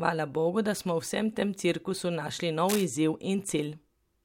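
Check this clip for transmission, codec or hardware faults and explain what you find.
There is one hardware fault in this speech clip: cable scratch noise from 2.69 to 2.85 s. Its likely cause is a worn cable, connector or control being moved, so the contact resistance jumps about rapidly. That puts dense, uneven bursts of noise into the signal, about 5 dB below the speech. It is heard as a brief scratchy rustle over the voice. On a spectrogram it shows as a ragged broadband smear across that 0.16 s span. The waveform shows jagged, irregular spikes riding on the speech.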